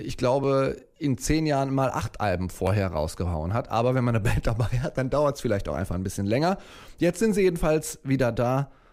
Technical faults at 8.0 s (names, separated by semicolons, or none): none